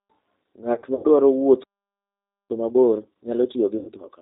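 The whole speech clip runs through the G.729 codec at 8 kbit/s, and the damage is plain. Nothing above 4 kHz survives. The voice is rebuilt from a filter, a pitch predictor and a few pulses per frame, so it sounds rough and slightly synthetic.

From 0.74 to 1.05 s there is VoIP packet loss concealed by the speech codec. About 150 ms of audio is missing, scattered over 300 ms, with the longest gap 90 ms. The decoder fills the holes by stretching its last sound. The result is a stretched sound that fades, and it stays weak after the audio returns.

At 1.63 s a playback stall cuts the sound off mid-flow. Silence lasts 0.86 s, until 2.50 s. The likely cause is a player that ran out of data or was blocked.

From 2.50 s to the end comes time-compressed catch-up. The player trims its backlog by cutting small pieces and cross-fading the joins. The audio runs about 1.25 times fast at normal pitch. 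It sounds hurried.

Inside this hurried stretch, at 3.78 to 3.92 s, packet loss strikes again. About 90 ms is lost and concealed. It leaves another short stretched, decaying smear.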